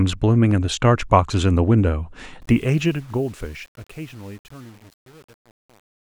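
From 2.42 s a fade-out runs through a stage that keeps too few bits, consistent with 8-bit truncation distortion on a fade, adding no dither. From 2.81 s to the end it turns gritty.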